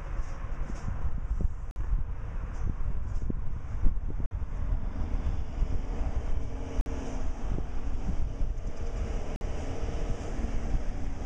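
At 1.71, 4.26, 6.81 and 9.36 s there's a gap between chunks: a hard-edged 50 ms hole after every 2.5 s of audio. Nothing is lost; the chunks just get laid down with silence between them, so the sound keeps stopping dead at each join.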